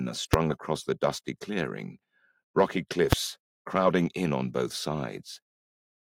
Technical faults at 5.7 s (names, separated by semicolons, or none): none